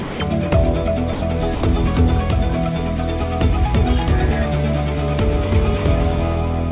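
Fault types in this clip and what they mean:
Sound dropped by the voice detector: three times, the sound gives way to comfort noise, likely because the sender's detector mistook it for background and stopped sending.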